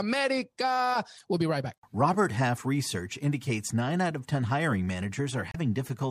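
At 1.17 to 1.22 s and again at 5.50 to 5.56 s, the speech breaks into a brief blip of damaged data in a compressed stream. Corrupted bytes leave the decoder unable to read those frames correctly, so it loses sync and hunts for the next valid frame header. Each burst lasts about 50 ms. On a spectrogram it shows as a narrow vertical smear of broadband energy that cuts across the speech harmonics, and the waveform has a jagged, discontinuous patch.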